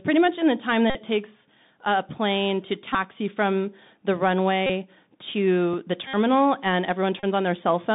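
Bluetooth CVSD headset codec damage runs through the whole of this speech recording. The band is squeezed to roughly 150 Hz to 3.7 kHz, consistent with a 64 kbps one-bit delta stream whose adaptive step can't keep up with loud high content, leaving scratchy s sounds and a granular hiss beneath the voice. Bluetooth headset packet repeats break in at 0.90–0.95, 2.93–2.95, 4.67–4.71, 6.07–6.15 and 7.20–7.25 s. Lost headset packets were replaced by re-decoding the previous packet, and repeating every 3.75 ms turns each gap of about 19 to 64 ms into a brief buzz near 267 Hz. A phantom power thump lands at 5.74–5.81 s, a low thud that dies away in about 16 ms, the mark of a supply being switched on a live input and its voltage step passing through the coupling capacitors.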